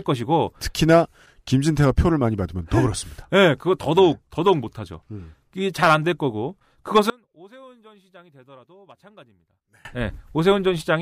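One channel inverted, 7.10 to 9.85 s: the speech drops by about 28 dB to a faint trace, likely from one stereo channel's reversed polarity cancelling the shared centre in mono.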